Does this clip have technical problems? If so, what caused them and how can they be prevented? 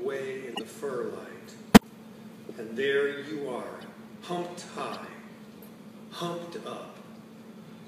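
Yes. Corrupt frames were decoded: bit errors damaged compressed frames, and the decoder played them anyway, putting energy at wrong frequencies. The result is brief chirps or noise bursts at 0.53–0.61 s, 1.73–1.84 s (loudest, close to full scale), 3.81–3.85 s and 4.92–4.96 s (both faint). Checksums with error concealment, so damaged frames are discarded and masked rather than played, would prevent this.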